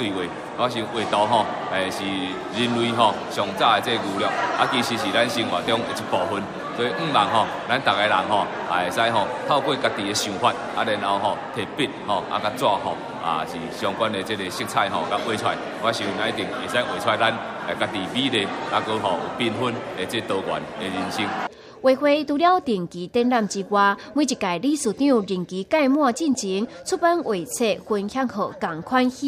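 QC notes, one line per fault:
No faults heard.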